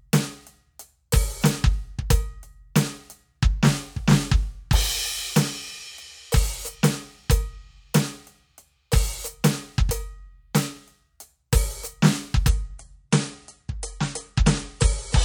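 At 12.49 s the music switches abruptly to an adaptive stream at a lower bitrate and stays there to the end. The player dropped to a cheaper encoding, which fits a fall from about 128 to about 40 kbit/s MP3. Everything above 10.6 kHz vanishes, and swirly, watery codec artefacts rise. Unlike a rebuffering stall, there is no gap or pause, and unlike a plain low-pass filter, the added artefacts make the thinned sound grainy.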